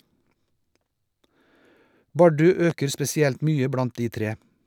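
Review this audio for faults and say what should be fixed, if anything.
There's a single loud pop at 2.70 to 2.73 s, a short, sharp click that peaks a few decibels above the speech, which carries on underneath without a break. It sounds like a sudden voltage step hitting the signal chain, most likely a cable being knocked, a switch, or a static discharge, with the following circuitry shaping it into that brief thump. Cut it out or repair it with a click-removal pass. Next time, secure connectors and leave switches alone while recording.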